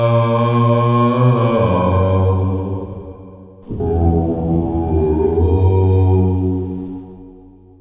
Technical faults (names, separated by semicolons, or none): none